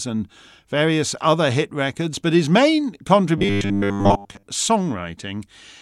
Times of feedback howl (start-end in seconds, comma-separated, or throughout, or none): none